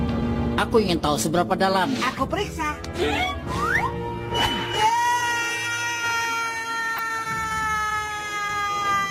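At 6.95 to 6.99 s a short burst of DAB burbling appears: bit errors slipped past error correction at a low rate, around a tenth of a percent, corrupting a handful of MP2 frames. Wrong samples put short blips of noise into single sub-bands, heard as brief noisy blips and seen on a spectrogram as isolated bright horizontal blocks.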